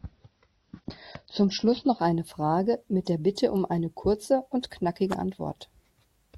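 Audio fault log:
0.0–2.0 s, adaptive stream starting at a low bitrate: the speech has nothing above 6.3 kHz and a smeared, codec-heavy texture, which fits a low-rate AAC stream near 24 kbit/s. At 2.0 s it jumps to a 96 kbit/s AAC stream with no gap. On a spectrogram there is a flat ceiling that suddenly lifts.
3.57 s, electrical switching spike: a sharp snap sits on top of the speech just before "eine kurze und knackige". It is likely from a nearby switch arcing into the line. On the waveform it shows as a narrow vertical spike, and on a spectrogram as a thin broadband stripe.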